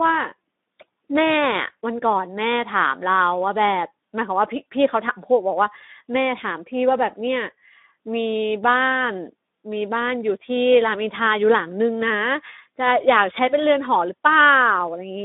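From start to end the speech carries Speex codec damage: hoarse, noisy CELP texture with nothing above 3.8 kHz, likely an 11 kbps narrowband setting rather than plain band-limiting.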